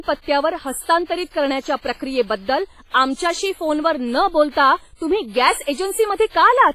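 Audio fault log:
throughout, WMA compression: the speech was most likely squeezed through a Windows Media Audio encoder at a low bitrate, consistent with around 24 kbps. Its long transform blocks smear quantisation noise across tens of milliseconds, so each syllable carries a ringing, washy halo and a hiss that swells and fades with the voice. Weaker spectral detail has been zeroed out, and nothing survives above 15.4 kHz.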